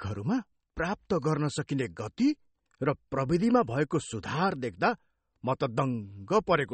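Throughout the speech, a plainly audible watery, swirling texture comes and goes, with nothing above 8.4 kHz. This is likely MP3 compression, consistent with a low bitrate of about 32 kbps: weak frequency lines drop in and out between frames, and the treble is cut off.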